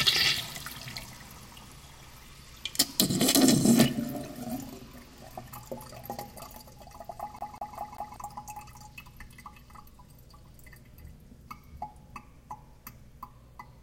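A CD stuck on one turn runs from 7.39 to 8.16 s. A scratch keeps throwing the laser back one track, so the same 194 ms slice of sound plays four times, with a brief mute at each jump, giving a fast, even stutter.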